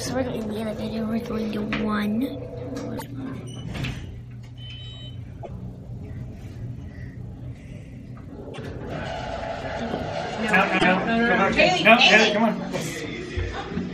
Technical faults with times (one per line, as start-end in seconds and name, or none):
2.94-3.02 damaged data in a compressed stream
5.40-5.49 damaged data in a compressed stream
8.50-8.59 damaged data in a compressed stream
10.75-10.85 damaged data in a compressed stream